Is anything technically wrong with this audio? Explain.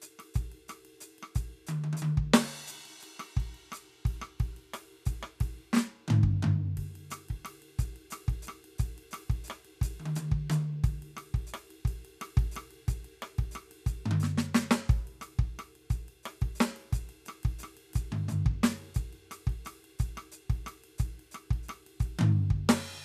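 No, the music comes through as a steady, intact signal with nothing technically amiss to be heard.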